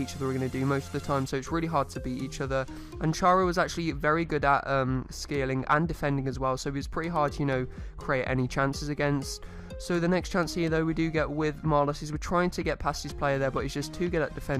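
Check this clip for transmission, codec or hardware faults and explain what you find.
No transmission, codec or hardware faults can be heard in the clip. There is nothing in the audio to point to a problem anywhere along its path.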